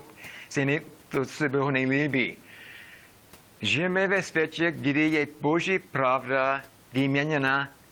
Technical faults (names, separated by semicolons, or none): clock drift between sender and receiver; repeated timing corrections